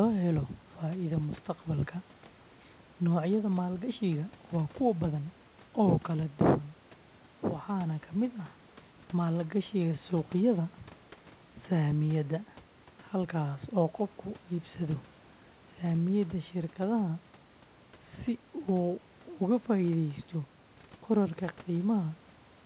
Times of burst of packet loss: none

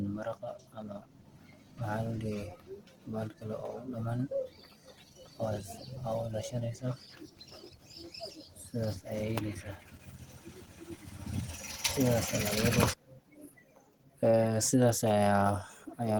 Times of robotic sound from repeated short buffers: none

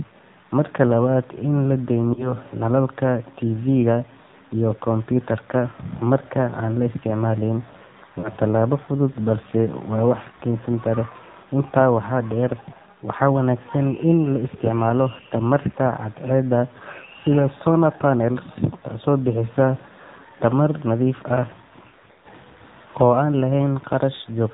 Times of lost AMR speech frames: 2.14-2.33, 8.20-8.29, 21.88-22.27

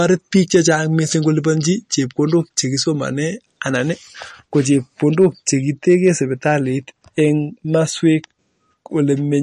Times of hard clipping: 0.06-0.75, 5.20-5.26, 5.89-6.08

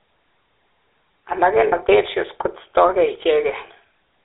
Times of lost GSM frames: 1.68-1.73

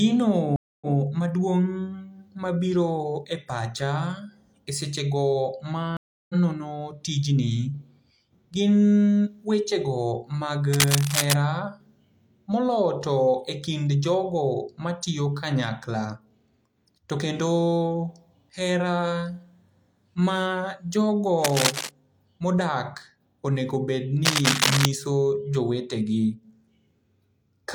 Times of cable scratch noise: 10.73-11.34, 21.44-21.90, 24.25-24.85

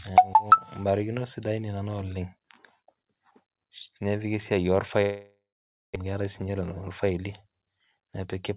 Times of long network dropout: 5.02-5.98

